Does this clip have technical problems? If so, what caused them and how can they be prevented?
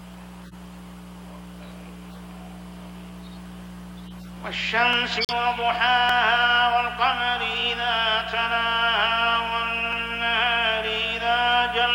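Yes. A corrupt frame decoded at 0.44 to 0.54 s, 2.11 to 2.18 s and 4.07 to 4.27 s produces brief chirps, squeaks, blips or bursts of noise where damaged frames, roughly two and then about five, were played with misread gains. On a spectrogram these show as smeared bands of energy. Better error detection, such as CRC checks that make the decoder conceal damaged frames instead of playing them, would prevent this.

A corrupt frame muted at 5.17 to 5.33 s leaves an abrupt silent hole, which fits three rejected frames. It shows as a flat gap in the waveform. Forward error correction or retransmission on the channel would avoid the gap.

Single sharp clicks at 4.93 s, 6.09 s and 9.93 s are likely dropped samples, with only a fraction of a millisecond lost each time. Each shows as a thin vertical line on the spectrogram. Larger buffers and clock-synchronised capture would prevent these dropouts.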